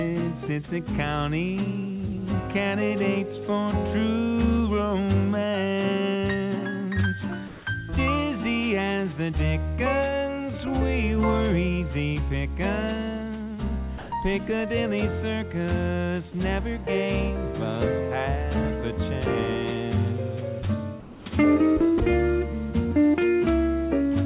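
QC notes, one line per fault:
7.48–7.66 s and 21.00–21.26 s, comfort noise in place of the background: for 180 ms and then 260 ms, the quiet background, which sits about 23 dB and about 19 dB below the loud passages, turns into a smooth, featureless hiss. It is about 2 dB louder in the first gap and about 2 dB quieter in the second. The likely cause is discontinuous transmission: the receiver synthesises shaped noise while the sender is silent. On a spectrogram, the textured background becomes a flat, even band ending at the 4 kHz ceiling, which fits a narrowband G.711-type call path. The waveform shows a uniform noise floor with a slight level step at each edge.
13.98–14.12 s, 16.32–16.34 s and 21.98–22.00 s, sound dropped by the voice detector: actual sound vanishes and steady noise takes its place. The first gap removes 140 ms, the second about 10 ms and the third 20 ms. Each one is heard as a clipped edge or a brief hole before the audio resumes. 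The likely cause is the voice detector misjudging faint sound as background and stopping transmission, after which the receiver plays comfort noise. On a waveform, the envelope drops abruptly to a flat noise level. On a spectrogram, the sound's detail gives way to a smooth band.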